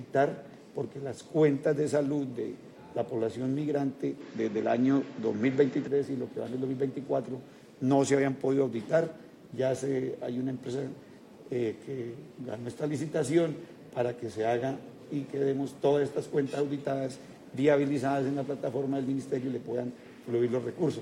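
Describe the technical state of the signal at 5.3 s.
At 5.3 s you're right in the middle of a dull stretch running from about 4.20 to 5.88 s, most likely the input switched to a poorer device for that span. The band just stops at 7.6 kHz, so everything loses its air and sounds a bit boxy. The level shifts by a few dB, and there's a faint new noise floor sitting well below the signal. The changeover is seamless, with no gap at either edge.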